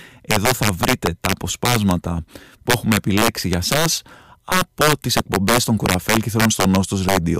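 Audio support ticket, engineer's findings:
Violent cracks on loud speech peaks throughout, sharper than clipping. Integer overflow: gain about 6 dB over, wrapping a small fraction of peak samples to opposite sign.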